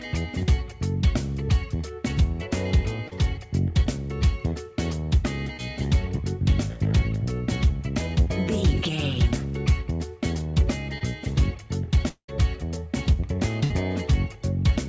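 It's a call recording, band-limited with nothing above 8 kHz, which fits a G.722 call path, and it has three kinds of network trouble. There are short concealed packet losses at 3.08, 5.57 and 10.98 s: a few hundredths of a second went missing each time, and the receiver papered over them, so you get quick smears or wobbles. From 12.08 to 12.30 s there's a roughly 200 ms gap where the last sound carries on, fades, and drops to silence for about 90 ms. That's likely a long network dropout, and the audio comes back with that chunk gone. At 13.64 to 13.72 s, a burst of packet loss knocks out about 60 ms, heard as the last sound carrying on and fading before the sound picks up further along.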